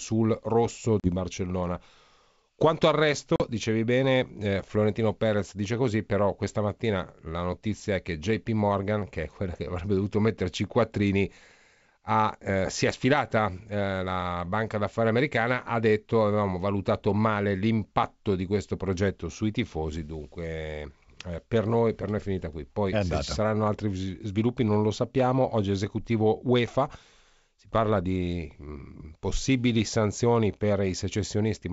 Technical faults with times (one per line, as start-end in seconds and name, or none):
1.00-1.09 packet loss on an ADPCM call
3.36-3.42 packet loss on an ADPCM call